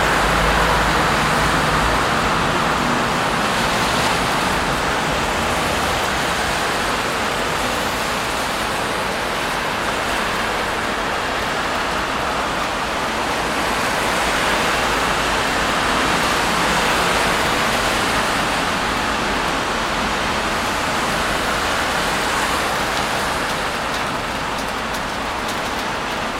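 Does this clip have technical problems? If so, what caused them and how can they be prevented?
No, nothing in the clip points to a technical fault, so there is no cause to trace and nothing to prevent.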